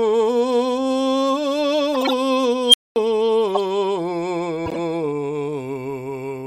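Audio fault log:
1.94 to 2.12 s, 3.55 to 3.58 s and 4.66 to 4.77 s, corrupt frame decoded: three bursts of chirpy noise cut into the music, where damaged compressed frames got played anyway. Misread gains and codes throw energy to the wrong frequencies for a few frames at a time, peaking around -5 dBFS at 3.55 s.
2.67 to 2.96 s, unstable filter: a tone near 3 kHz swells over about 67 ms into a loud squeal, then the sound drops out for about 223 ms. A recursive filter with bad coefficients ran away, overflowed, and went silent until it reset.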